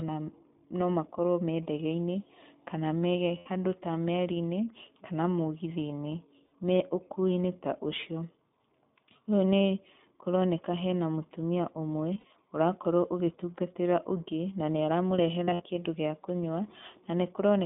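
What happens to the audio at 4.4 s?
At 4.4 s the speech carries iLBC codec damage, present from start to finish rather than at that moment alone. The codec squeezes the signal into a telephone band of roughly 200 Hz to 3.6 kHz and codes the excitation of each 20 ms frame independently, at a rate that points to about 15 kbps. Consonant detail and air above the band are gone, and the speech has a plainly audible rough, synthetic texture.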